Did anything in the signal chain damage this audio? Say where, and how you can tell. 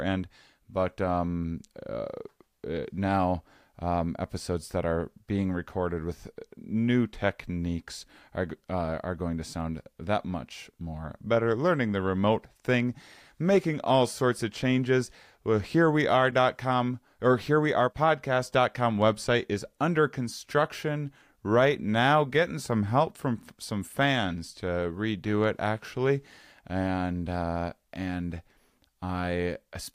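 No, nothing in this speech recording points to damage at any stage of the chain. There is nothing to trace back to wiring, conversion, buffering, processing, transmission, storage or playback.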